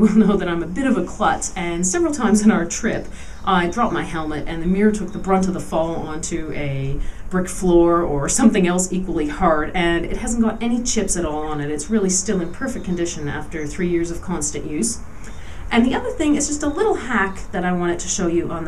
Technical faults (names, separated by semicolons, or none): none